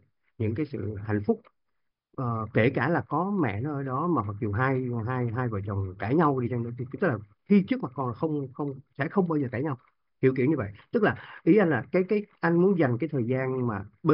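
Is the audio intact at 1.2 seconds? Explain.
Yes, at 1.2 seconds the speech plays through cleanly with no audible fault.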